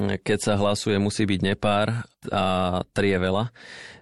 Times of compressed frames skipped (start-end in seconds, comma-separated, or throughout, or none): 2.79